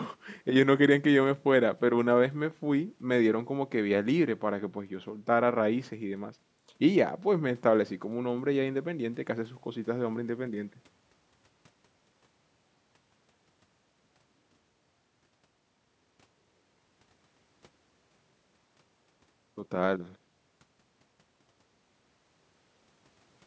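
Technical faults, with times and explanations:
No technical faults, with times or otherwise; the only processing is the call's microphone path, which trims the lowest bass and leaves nothing above 8 kHz, as that path normally does.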